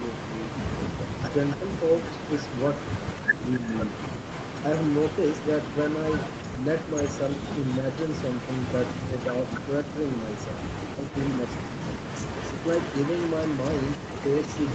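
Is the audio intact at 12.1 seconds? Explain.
No. From 12.04 s to the end of the clip, a faint, delayed copy of the speech trails the original by about 275 ms, roughly 15 dB quieter. This is an echo leak. The likely cause is that one side of the call was on a loudspeaker and its echo canceller failed to fully remove what its microphone picked up, so that residue was sent back into the call.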